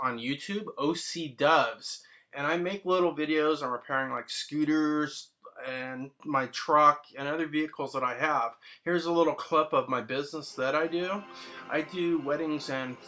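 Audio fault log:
Nothing stood out on listening to this recording.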